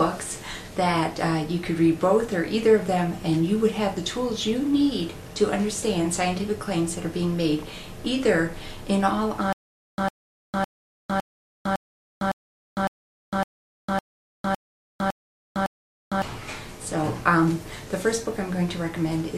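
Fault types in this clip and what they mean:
Stutter with silent gaps: From 9.53 to 16.22 s, a 104 ms fragment of the sound repeats twelve times, each followed by about 454 ms of digital silence, every 558 ms. This points to a likely playback or stream stall. Audio due in that span is lost.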